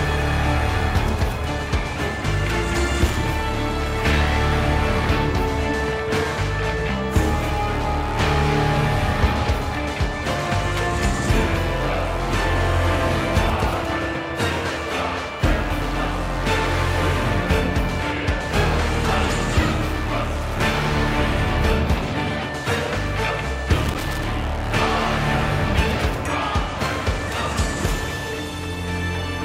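Two short bursts of loose connector crackle break into the audio, at 3.07 to 3.26 s and again at 23.84 to 24.23 s, the second roughly twice as long. A worn or dirty contact is making and breaking as it shifts, chopping the signal. Unlike evenly spaced digital clicks or steady vinyl crackle, these bursts are irregular and scratchy, clustered in brief episodes.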